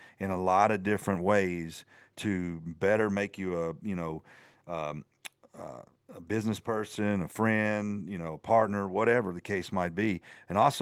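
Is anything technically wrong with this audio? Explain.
No, nothing technically wrong can be heard in this speech recording. No point in the audio stands out as a defect on careful listening.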